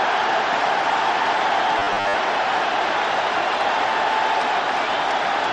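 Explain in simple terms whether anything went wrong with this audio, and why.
From 1.79 to 2.15 s, the audio turns into a flat, metallic buzz near 100 Hz. This is robotic sound from repeated short buffers. It likely happened because new audio arrived too slowly, so tiny 10 ms pieces were repeated, covering about half that stretch.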